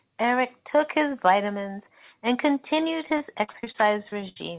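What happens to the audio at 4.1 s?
At 4.1 s the speech is inside a stretch of repeated packet loss (robotic sound) running from 3.06 to 4.37 s. Packets kept arriving late or not at all, and each hole was patched by stretching the preceding sound, about ten gaps in all, the longest 70 ms, adding up to roughly a fifth of the span. The result is choppy, robotic speech with pieces missing, heard through a narrowband line with nothing above 4 kHz, consistent with G.711.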